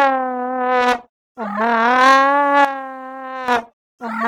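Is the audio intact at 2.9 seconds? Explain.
No. From 2.65 to 3.48 s there is a sudden gain jump. The digital gain was likely switched in a single sample with no ramp, dropping the level by about 11 dB at 2.65 s and restoring it just as abruptly at 3.48 s. The audio and its background noise step down together, so the whole passage sounds suddenly quieter rather than faded. At 2.9 s you are inside that lowered section.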